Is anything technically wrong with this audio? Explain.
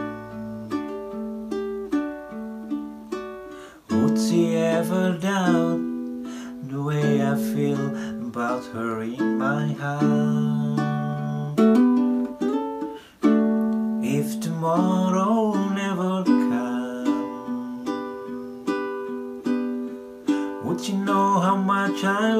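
No, nothing technically wrong can be heard in this audio. No working path is singled out here, so there is nothing further to describe.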